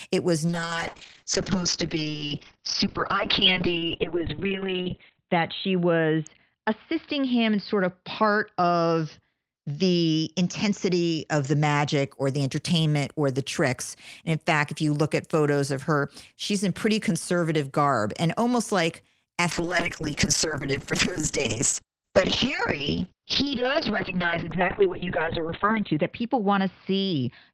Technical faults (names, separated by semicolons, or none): call bitrate drop